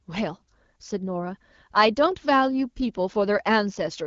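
No technical faults detected.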